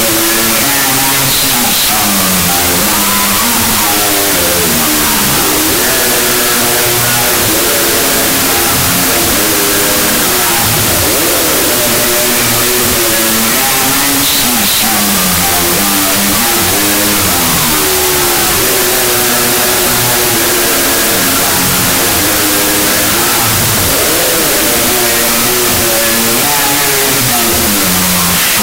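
Throughout, wrong sample width: 32-bit float read as 16-bit integer gives half-speed, octave-low sound under loud noise; spectrogram a broadband smear.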